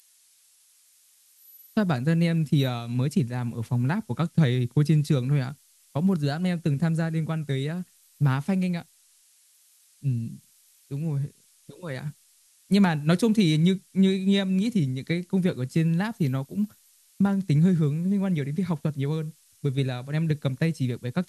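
Switching supply whistle runs through the whole speech clip: a thin tone wandering between 12.0 and 12.2 kHz, around 20 dB below the speech, from a switching power supply running in audible burst mode or beating with another supply.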